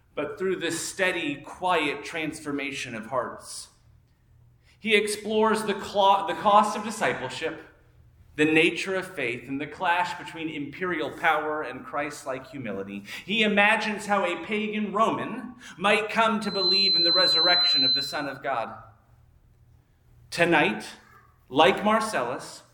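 From 16.41 to 18.39 s a loudspeaker feedback squeal swells up in a fraction of a second: a pure 4.1 kHz tone, roughly 5 dB above the sound, as the microphone-to-speaker loop gain passes unity. A spectrogram shows one bright horizontal line; the waveform's envelope bulges.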